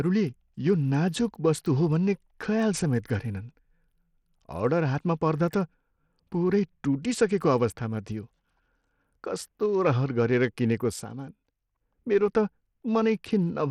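Speech runs the whole way with dull, flickering treble and a gritty haze, likely Bluetooth SBC compression at a low bitrate near 80 kbps; a spectrogram shows ragged, patchy upper bands. From 11.03 to 11.81 s one channel drops out, most likely a lost stereo channel, so the level falls abruptly by about 6 dB, visible as a shrunken waveform block.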